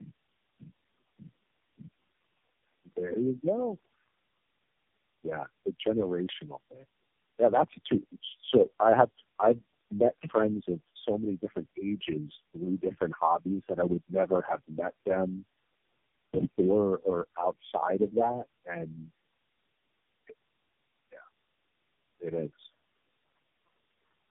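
All the way through, the speech has tandem speech coding. It sounds like roughly four low-rate mobile coders in a row, each re-coding the last one's damage, so it's rough, warbly and muffled, with nothing above 3.7 kHz. Room noise sits about 24 dB under it.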